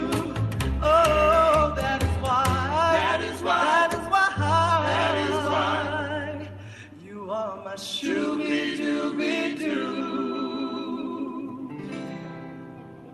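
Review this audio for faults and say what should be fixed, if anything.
Nothing needs fixing; the audio has passed through a call codec path, with the top of the band ending around 12 kHz as that path's normal coding limit.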